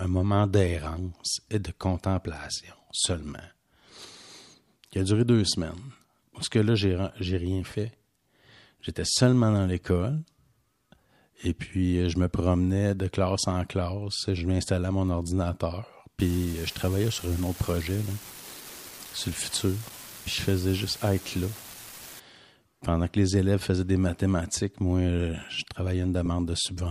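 A marginal data line in the speech path, likely carried over an LC3 Bluetooth link, flips one bit in a random share of samples from 16.2 s to 22.2 s. Each flipped bit adds a spike of identical size, so a steady crackling fizz sits over the speech and carries on through its pauses. At 26.26 s the lost LE Audio frames fault appears as a single gap of about 10 ms, which fits one missing LC3 frame. The decoder fills it with the previous spectrum under randomised signs, giving a brief noisy smear in place of the tonal detail.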